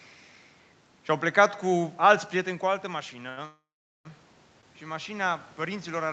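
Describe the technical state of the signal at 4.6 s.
Right around 4.61 to 4.65 s there's a short stall from a late packet. A chunk of the speech showed up late, the jitter buffer ran dry, and the receiver covered the gap by stretching the last bit of sound for about 19 ms before carrying on from the same spot. Nothing is actually lost, but playout ends up about 19 ms later, and you hear a sound held a touch too long, with a faint buzzy or dipped quality.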